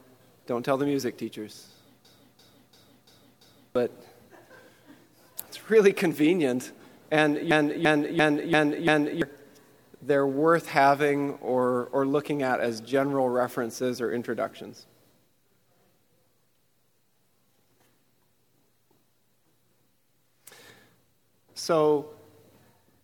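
A system hang loop hits the audio twice, from 2.05 to 3.76 s and from 7.51 to 9.22 s. Each time, a 341 ms slice repeats five times at about 2.93 Hz, which fits a 16384-sample ring buffer replaying while the driver froze. About one and a half seconds of real sound is lost each time. The waveform shows identical blocks, and the spectrogram shows repeating vertical stripes.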